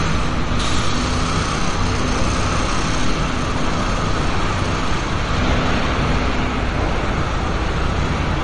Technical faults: MP3 compression

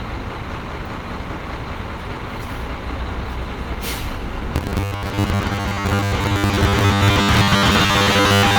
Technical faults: robotic sound from repeated short buffers

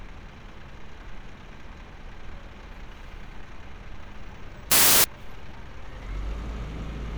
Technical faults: samples built from the wrong bytes

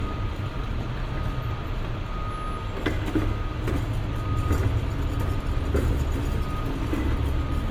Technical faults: generation loss

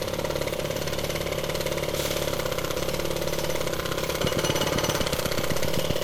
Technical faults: generation loss; train of clicks

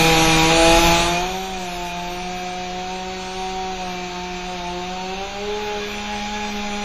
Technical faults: WMA compression

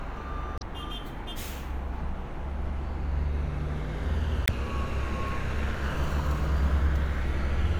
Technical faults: damaged data in a compressed stream

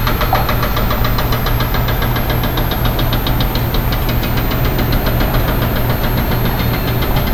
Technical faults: switching supply whistle

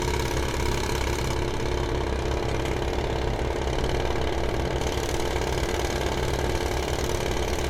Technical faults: generation loss; de-emphasis applied wrongly

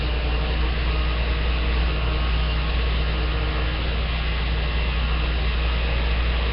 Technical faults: Nellymoser compression

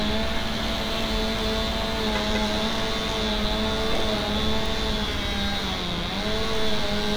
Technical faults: bit error spike

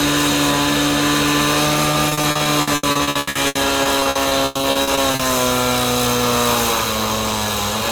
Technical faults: repeated packet loss (robotic sound)

